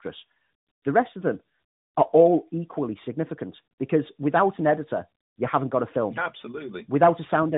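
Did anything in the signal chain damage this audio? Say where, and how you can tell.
Yes, at the codec stage: tandem speech coding runs through the whole clip. The speech is rough, muffled and warbly with nothing above 3.8 kHz, which fits a CVSD link, then G.711 A-law, then AMR-NB at 12.2 kbit/s. Each speech coder re-encodes its predecessor's errors, so the damage compounds.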